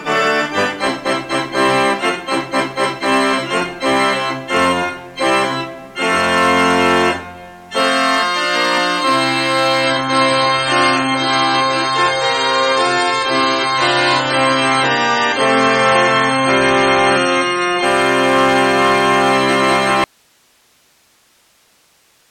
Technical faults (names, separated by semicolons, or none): adaptive stream at a lower bitrate; audio dropout to a faint residue